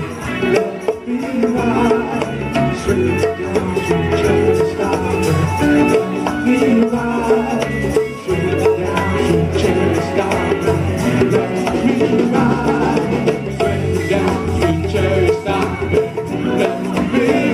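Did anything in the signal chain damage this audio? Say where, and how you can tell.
Yes. The damage happened at the converter, and it runs through the whole clip. This is sample clock jitter. A fine hiss and roughness rides on the sound and swells with loud, bright passages. It drops away in silence. The converter's clock wanders by a few microseconds, so each sample lands slightly early or late. Steep waveform slopes turn that timing error into noise roughly 40 dB below the signal.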